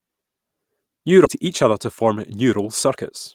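A short speech recording with two timing faults. At 1.25 to 1.27 s there is a skip ahead: roughly 0.7 s of audio is missing, and the two sides are joined directly with no silence or fill. That abrupt splice sets it apart from a dropout or concealed loss, which would leave a gap or smeared patch. From 1.39 to 3.10 s a jitter buffer speed-up follows as the receiver drains its backlog, trimming tiny pitch-period pieces repeatedly so speech runs about 6 percent fast and loses roughly a tenth of a second overall. The pitch stays unchanged, which separates this from resampling or a clock-rate error, where speeding up would also raise the pitch.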